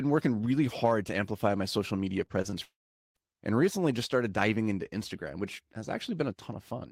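Short concealed packet loss hits this speech clip three times in quick succession, at 2.25 to 2.32 s, 2.42 to 2.57 s and 2.50 to 2.54 s. Gaps of 20 to 40 ms were bridged by extending the preceding sound, leaving brief smears, and the middle event also drops about 11 ms outright. A long network dropout follows from 2.63 to 3.17 s. The last sound carries on briefly as a fading buzz or hiss, then about 0.44 s of silence sits where roughly half a second of audio was likely lost in transit. The sound resumes further on without the missing portion.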